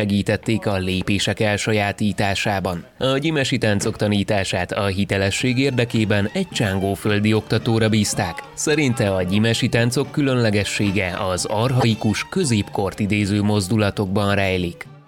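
At 8.97 s and again from 11.80 to 11.84 s there's a corrupt frame decoded: flipped bits in what sounds like one frame each time, played anyway, throwing energy to the wrong frequencies. You get a quick blip, the second one noticeably louder.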